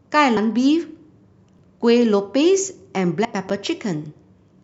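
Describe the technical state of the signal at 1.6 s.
At 1.59 s the speech shows overlapping chunks. The audio is being processed in 2-second chunks, and this chunk begins about 7 ms before the previous one finished. That short stretch of speech plays twice at the join, and the sudden jump back in the waveform is heard as a brief click or tiny stutter. Unlike a dropout, nothing is missing at this point: the extra sound is a repeat of speech that just played.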